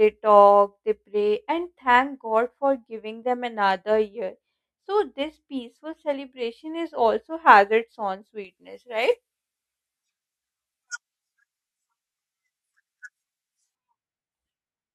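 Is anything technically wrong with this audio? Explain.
Yes. From 8.45 s to 13.75 s the speech turns thin, bright and sibilant, with treble about 11 dB hotter at 10 kHz than at 1 kHz. This is pre-emphasis left on: the high-frequency boost, whose shape fits a J.17 curve, was never undone by the matching de-emphasis.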